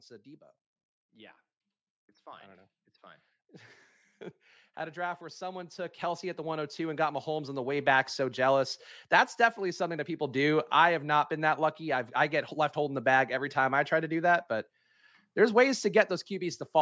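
From 4.75 s to 8.46 s, automatic gain rising lifts the level by about 14 dB as the gain control, judging the input too quiet, steadily raises its gain; the speech and its background swell up together over nearly four seconds, beneath the 8 kHz ceiling of the call microphone path.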